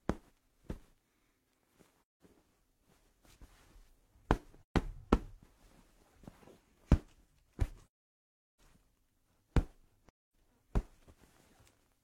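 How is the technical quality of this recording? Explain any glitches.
The recording has four dropouts, all AAC frame loss with muting. Blocks of encoded data failed to arrive, and the decoder filled each gap with silence by zeroing the spectrum. The gaps occur at 1.98 to 2.20 s, 4.64 to 4.76 s, 7.99 to 8.60 s and 10.09 to 10.33 s. They last from about 0.13 s to nearly 0.73 s, and the third is clearly the longest. The overlapping transform windows fade the sound out and back in, so each one is a soft-edged hole.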